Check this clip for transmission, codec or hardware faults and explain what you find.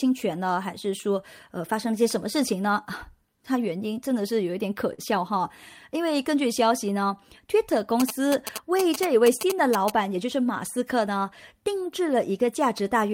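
Three faults show up in this speech clip: a brief stall, a stretch of GSM interference, and a short speed-up.

From 4.93 to 5.01 s one sound is held too long, a smear with a slight buzz or dip lasting about 43 ms, after which the speech resumes where it left off with nothing skipped. This is a short stall from a late packet. The packet had not reached the receiver in time, so its jitter buffer emptied and it extended the last audio until the data came in. The pause pushes everything after it about 43 ms later.

Between 8.00 and 9.90 s a galloping dit-dit-dit of short buzzes sits under the speech, only a little quieter than it. These are GSM signalling bursts. A 2G phone nearby was exchanging short groups of radio bursts with the network, and some part of the audio circuit rectified them into sound. That gives the buzz its pitch of about 217 Hz, the rate at which the phone transmits.

From 10.14 to 11.07 s the speech sounds hurried, running about 5% fast while keeping its normal pitch. 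This is a jitter buffer speed-up. Audio had piled up in the buffer beyond its target, so the receiver trimmed many tiny pitch-period slices in quick succession to catch up. Around 50 ms was cut in total, spread across that stretch.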